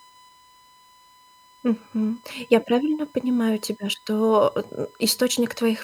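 A speech clip with USB whine running from start to end. It is a steady, fixed-pitch tone at 1 kHz, strongest at that fundamental. It sits about 30 dB below the speech. The bus draws current in 1 ms frames. That pulsing leaks into the audio through shared power or ground.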